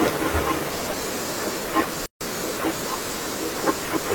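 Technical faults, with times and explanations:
2.06 to 2.21 s, gap at a join of encoded pieces: a 149 ms silence cuts into the speech, from encoder delay and end padding left in where separately encoded pieces were joined.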